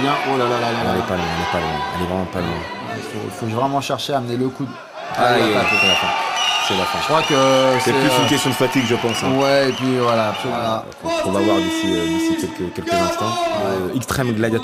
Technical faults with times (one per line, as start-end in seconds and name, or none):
none